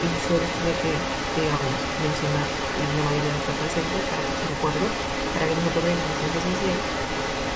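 Throughout the speech, what is likely an echo leak from a far-end loudspeaker goes uncancelled, so the voice returns about 326 ms late and only a few decibels quieter, a strong second copy trailing the speech and smearing it, with everything above 8 kHz already absent.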